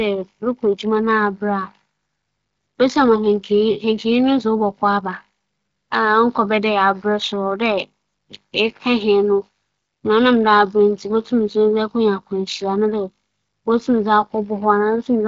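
The speech has the band-limited sound of an AMR wideband (HD Voice) link, with nothing above about 7.6 kHz and a clarity that fits the codec's high rate of roughly 23 kbit/s, and no technical faults can be heard.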